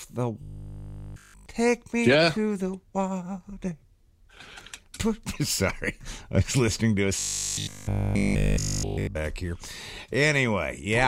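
From 0.42 to 1.46 s and again from 7.19 to 9.17 s, the audio collapses into a rigid, metallic buzz pitched at 50 Hz, only loosely tracing the underlying sound. This is robotic sound from repeated short buffers, likely caused by audio arriving too late: a 20 ms chunk is looped in place of the missing material, and the repetition imposes that fixed 50 Hz tone, with essentially the whole stretch replaced.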